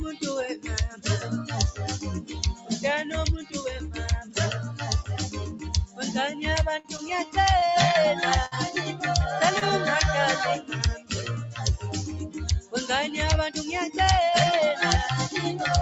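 Throughout, a noise suppressor is applied to music or sounds it was not built for. It treats steady, sustained parts as noise. Levels swing by roughly 10 dB as it clamps and releases. Attacks pass, while held tones and tails pump and thin.

Sound is cut by the noise suppressor at 0.89–1.53, 2.21–2.37, 2.53–2.78, 3.43–3.59, 4.22–4.37, 5.50–5.65 and 5.86–6.03 s. The drops reach about 10 to 13 dB. Sustained material sinks, and decays are chopped short.

A short stall from a late packet follows at 6.79 s. The receiver ran dry and stretched the last sound for 52 ms. Nothing is lost. A held, faintly buzzy smear marks the spot. A second stall at 7.59 s holds for 28 ms.

At 8.46 s comes a burst of packet loss. The receiver extends the last sound for 55 ms and fades it. It then resumes 60 ms further on. That stretch is simply gone, leaving a brief fading fill.

A third short stall from a late packet hits at 9.59 s. 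It holds the sound for 20 ms. This hitch delays the stream without dropping anything.

Sound is again cut by the noise suppressor at 10.95–11.13 s. This is the deepest dip, about 14 dB. A sustained element briefly collapses before recovering.

From 13.08 to 13.91 s a jitter buffer speed-up runs. Surplus buffered audio is trimmed in many tiny pitch-period slices, around 50 ms in total. Playback runs about 6% fast at unchanged pitch and sounds slightly hurried. The bandwidth stays capped at 8 kHz, which fits a mid-rate Opus stream.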